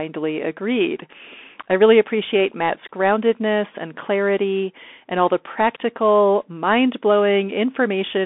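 Bluetooth CVSD headset codec damage runs throughout: one-bit delta coding chases the waveform, leaving granular hiss, scratchy s sounds, and nothing above 3.7 kHz.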